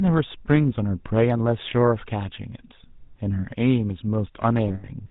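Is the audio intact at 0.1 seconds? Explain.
No, the speech at 0.1 s already carries the GSM full-rate codec's damage, which runs through the whole clip. It's plainly audible as a buzzy, gravelly roughness. Everything above 4 kHz is missing. Unlike a plain telephone band-limit, the grit comes from the regular-pulse excitation, which fits a 13 kbps rate.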